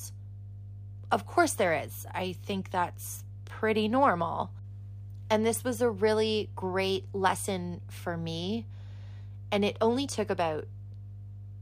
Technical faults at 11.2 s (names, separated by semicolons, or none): mains hum